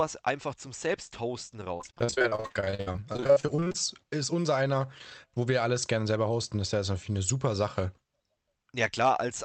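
Speech clip with a stretch of repeated packet loss (robotic sound) from about 1.77 to 3.76 s, ending just before "ist unser einer wo". Dozens of short dropouts, the longest 58 ms, each get papered over by stretching the last bit of sound, and over 40 percent of that window ends up concealed, so it turns choppy with chunks missing. It came through a call path whose top end stops around 8 kHz.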